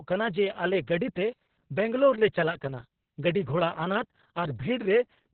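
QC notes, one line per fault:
Throughout, Opus voice compression: the speech is muffled, hoarse and a bit robotic, with everything above roughly 4 kHz gone. That points to SILK running narrowband at around 6 kbps, probably with long 60 ms frames, so the excitation gets coded very coarsely.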